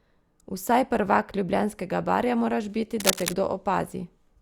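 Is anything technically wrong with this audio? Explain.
Yes. From 3.0 to 3.34 s, after "barja moraš biti", a rustling scratch about as loud as the speech: cable scratch noise, likely a jostled worn connector with fluctuating contact resistance.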